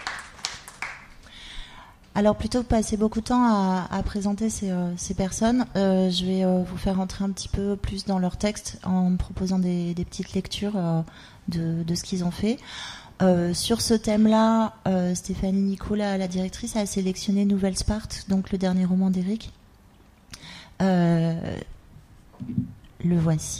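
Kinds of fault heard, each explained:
Nothing stood out on listening to this clip.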